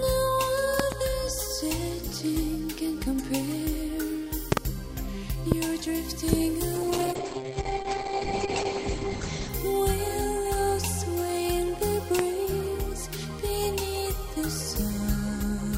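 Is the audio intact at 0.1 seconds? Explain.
Yes, at 0.1 s the audio is intact, with no dropout, click, distortion or other fault to be heard at that moment.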